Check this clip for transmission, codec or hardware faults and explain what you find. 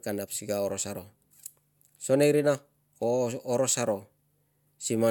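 Nothing to flag here, as the speech just runs along without anything a listener would pick out as a fault.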